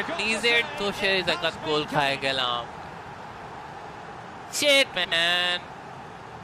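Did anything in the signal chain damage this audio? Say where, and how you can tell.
Yes. At the network stage, frames out of order: at 2.76–2.88 s and 4.96–5.13 s, two adjacent blocks (about 52 ms and 78 ms each) play swapped, producing a garbled flutter. The frames arrived misordered and were decoded as received, so no time is lost.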